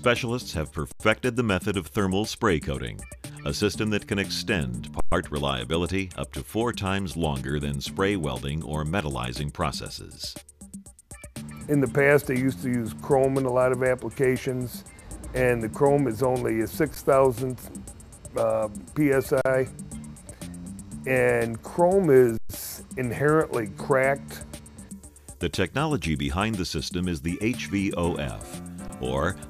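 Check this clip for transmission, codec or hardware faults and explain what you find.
Six underruns with held sample. At 0.92–1.0, 5.0–5.12, 16.95, 19.41–19.45, 22.37–22.49 and 28.88 s the output buffer ran dry and the converter froze on its last value for 14 to 120 ms. The sound halts without a click, then resumes softly where it stopped.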